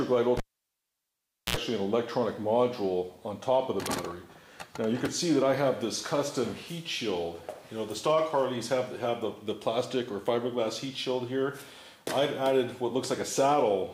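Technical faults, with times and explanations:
0.37–1.57 s, cable pulled and plugged in: a pop, 1.14 s of near-silence, a 69 ms 60 Hz buzz as the tip touches, then a pop; the waveform shows spikes flanking a flat gap, the spectrogram harmonic buzz bands.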